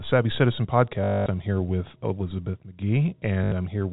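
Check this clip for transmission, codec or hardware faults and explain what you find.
Two stretches of packet loss with last packet repeated, over a telephone-band G.711 channel that cuts everything above 4 kHz. Packet loss with last packet repeated occurs at 1.04–1.26 s, just before "I'm here with", and at 3.44–3.52 s. The receiver replays the last packet to fill each gap, producing a robotic buzz near 50 Hz, which fits 20 ms packets.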